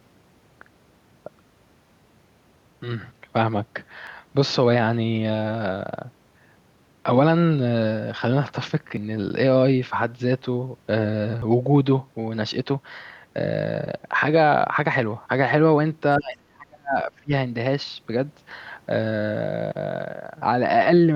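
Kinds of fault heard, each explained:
Audio missing between chunks: The speech skips at 4.07, 6.52, 8.97, 11.42, 13.87 and 16.32 s. The skips come about every 2.5 s. Each loses roughly 50 ms, and the two sides butt together with no gap. This likely comes from a chunked recorder dropping audio at each handover.
Speech suppressed in double talk: From 16.18 to 17.32 s the speech dips in pieces, falling by around 30 dB at worst and for about a second in total. An echo canceller likely turned the talker down while the far side spoke.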